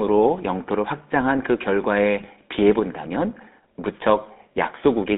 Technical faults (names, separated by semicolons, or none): GSM full-rate codec; GSM bit errors